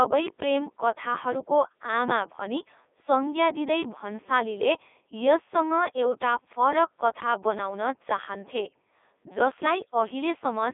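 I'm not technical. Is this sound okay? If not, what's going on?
No. A Codec 2 vocoder runs throughout: the speech is rebuilt from pitch and tone outlines instead of the real waveform, so it sounds robotic, buzzy and muffled.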